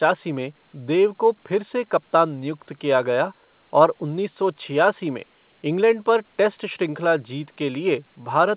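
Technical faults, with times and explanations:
No technical faults detected.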